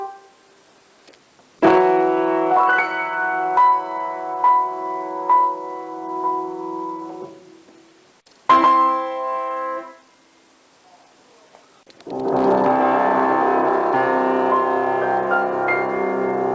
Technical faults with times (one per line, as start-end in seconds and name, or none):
none